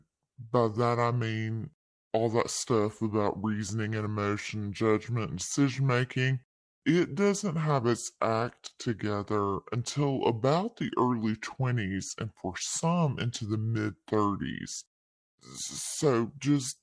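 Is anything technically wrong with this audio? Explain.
Yes. The speech has a wrong sample rate throughout: it was played back slower than recorded, with no conversion. Everything runs at 0.689 times normal speed and sits 6.45 semitones low, which fits 32 kHz material played at 22 kHz, so it sounds low and sluggish.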